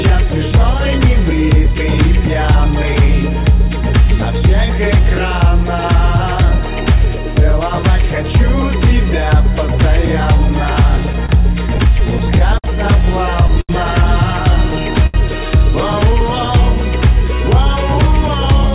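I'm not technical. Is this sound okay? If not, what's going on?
No, it has a few hiccups, all from the audio arriving over the network a bit unevenly.

From 10.97 to 12.67 s there's a stutter, which is repeated stalls. Pieces of audio kept showing up late, so the receiver ran dry ten times and kept stretching the last bit of sound to cover, at most about 58 ms each time. Nothing is actually lost, but it drags and catches.

At 13.61 s and again at 15.06 s you get a short stall from a late packet. One chunk wasn't there on time, so the sound just before it gets held for about 78 ms and then 74 ms, and then the audio picks up exactly where it left off. You might hear a slight buzz or dip there.

From 15.87 to 16.63 s there's a jitter buffer slow-down. The receiver was building up a bit of reserve by repeating tiny slices of sound, so that stretch plays about 4% slower without changing pitch. 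It's drawn out, maybe with a faint wobble.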